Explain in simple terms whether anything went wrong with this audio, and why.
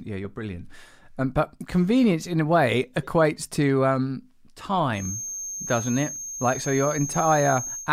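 From 4.92 s to the end, a thin whistle at one pitch sits behind the speech, slowly swelling and fading. This is a feedback whistle, a single high tone at 6.4 kHz. It stays quieter than the speech. The likely cause is loudspeaker sound leaking back into the microphone, looping just short of a howl.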